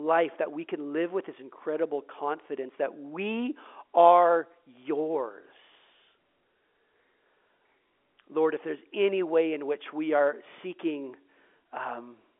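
No technical faults are audible.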